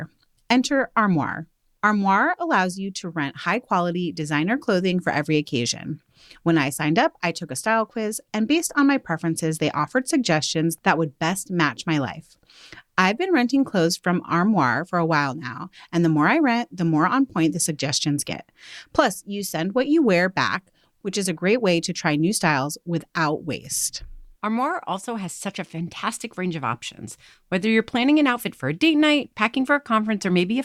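Nothing in the speech stood out as faulty on listening.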